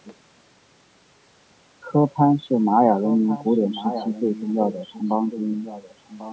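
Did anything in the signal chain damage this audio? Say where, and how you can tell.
Yes. In the call processing, the far end's echo canceller likely let its loudspeaker pickup through, causing echo leak. A copy of the speech trailing by about 1.09 s appears faintly at 0.04–0.15 s and 5.63–6.33 s, and strongest at 3.0–4.52 s.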